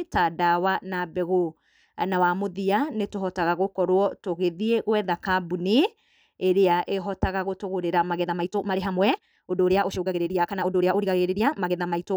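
From 8.17 s to the end, the speech runs at about 1.48 times its earlier pace with no rise in pitch, sounding rushed. This is a time-stretched section, likely from software squeezing the audio to fit a length by dropping short pieces.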